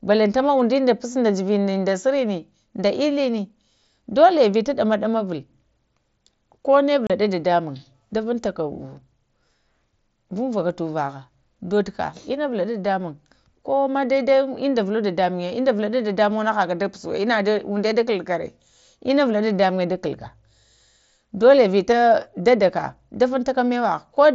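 At 7.07 to 7.10 s, unconcealed Bluetooth headset packet loss cuts a 30 ms hole in the speech, which fits about four lost packets between headset and phone, with nothing filling the gap. It appears as a sharp-edged blank column on the spectrogram and a flat break in the waveform, heard through the 8 kHz bandwidth of the mSBC link.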